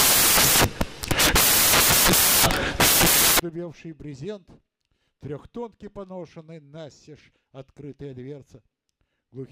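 Samples built from the wrong bytes, from 0 to 3.40 s: the bytes of each sample are mis-assembled, so the fast-changing low bits dominate and the audio becomes loud, harsh broadband noise.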